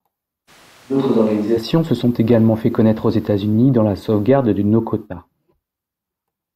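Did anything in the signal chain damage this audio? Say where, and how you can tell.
Yes. From 0.50 to 1.56 s the speech turns hollow and roomy, about 5 dB quieter, with thinner bass and a raised noise floor, likely a switch to a distant microphone at capture. On a spectrogram, low frequencies thin and reverberant smear fills the gaps, with abrupt edges at both times.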